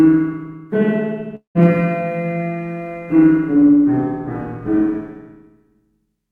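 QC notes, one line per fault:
1.35–1.57 s, long network dropout: the sound breaks off and is replaced by a smeared continuation of the last moment, a buzzy tail that fades out, leaving about 120 ms of near-silence before the audio resumes further along, with roughly 200 ms of material simply gone. The likely cause is a stretch of audio that never arrived, with the receiver padding the gap by extending what it last had until that guess faded away.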